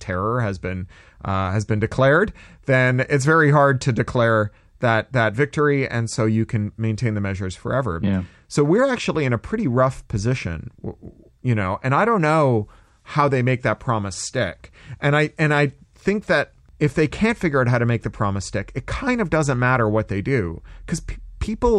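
No audible technical faults here.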